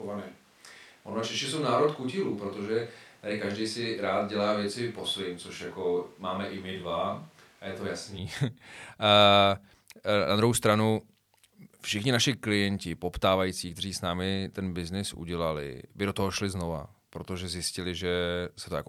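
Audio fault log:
0.00–8.17 s, switch to a distant microphone: already under way as the clip opens, the speech sounds roomy and hollow with thin bass, about 5 dB quieter, room noise around 30 dB below it, likely a far microphone standing in, until a sudden return to close pickup at 8.17 s.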